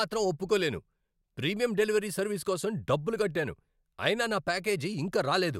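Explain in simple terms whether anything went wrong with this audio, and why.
Nothing went wrong here; the speech comes across steady and intact the whole way, with no glitches, dropouts or odd noises to point to.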